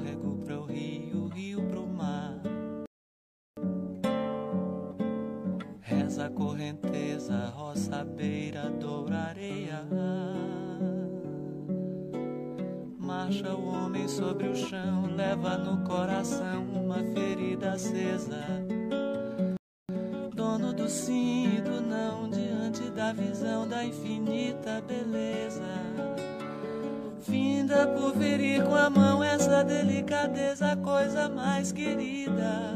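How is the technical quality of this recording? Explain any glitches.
Two rebuffering stalls interrupt the playback. The first runs from 2.86 to 3.57 s and adds about 0.71 s. The second runs from 19.57 to 19.89 s and adds about 0.32 s. In each case the player exhausted its downloaded audio and had to wait for more data. The sound drops abruptly to silence and then picks up at exactly the point where it stopped. Nothing is skipped, but the timeline stretches by each pause.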